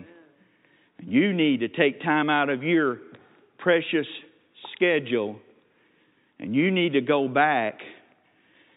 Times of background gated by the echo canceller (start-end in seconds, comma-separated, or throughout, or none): none